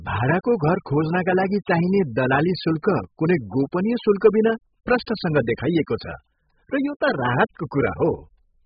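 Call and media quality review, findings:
Throughout: dull, smeared speech; sibilants fizzy and warbling. Heavy AAC compression (AAC-LC), likely at a very low bitrate, consistent with about 8 kbps. Coarsely quantised frequency lines; band limit pulled down. Spectrogram: flat ceiling at 5 kHz. Waveform: no obvious sign.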